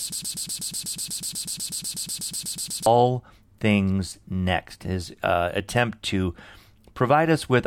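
From the very start until 2.86 s, a 0.12 s fragment of speech repeats back to back, a broken-record loop, likely from a stalled player resending its last buffer.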